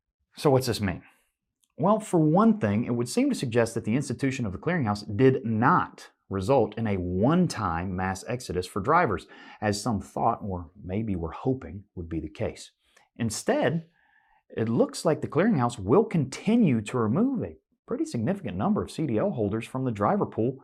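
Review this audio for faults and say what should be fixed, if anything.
Nothing stood out on listening, so there is nothing here that needs fixing.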